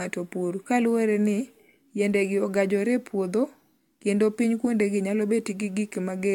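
Repeated lossy re-encoding is the likely cause of the generation loss heard across the whole of this speech clip. The sound suggests about four passes through an AAC-LC encoder at a rate that fits 96 kbit/s, each pass quantising on a shifted frame grid so errors pile up. Nothing survives above 17.4 kHz, and the speech has a swirly, hollow smear with softened consonant attacks, more degraded than a single encode at that rate would leave.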